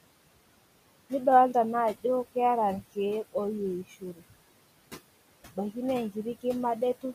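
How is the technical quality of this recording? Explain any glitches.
The recording has two faults from noise suppression: a steady processing artefact across the whole clip, and one spot where the suppressor eats into the speech. The room noise sits about 14 dB below the speech.

Noise suppressor artifacts run through all of the speech. The suppressor estimates the steady background and pulls down every band it judges to be noise, frame by frame, by about 20 dB. Between phrases the background sinks. Under the speech it rises again. On a spectrogram the noise floor pumps between dark gaps and lighter patches.

Speech cut by the noise suppressor occurs from 3.84 to 4.38 s. There the suppressor mistook some of the quieter speech for background and turned it down along with the noise, by about 17 dB at its deepest. Altogether around a third of a second is affected, so the softer sounds come out swallowed and faint. 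The waveform's envelope dips sharply in that stretch, and on the spectrogram the speech energy thins.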